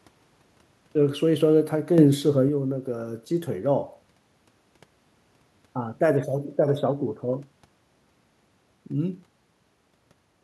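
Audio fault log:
1.98–2.49 s, sudden gain jump: the speech abruptly gets louder by about 7 dB and then drops back just as abruptly, and the faint room noise, sitting about 44 dB below the speech, rises and falls with it. Because the sound and the background step up together with no fade in or out, the change is likely a digital gain setting applied and then removed without a ramp.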